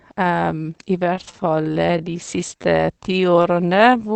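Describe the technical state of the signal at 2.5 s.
At 2.5 s the speech falls inside a time-stretched section, 0.96 to 4.15 s. Slowed to 0.67 times, pitch unchanged, it drags. Repeated short pieces are the likely cause.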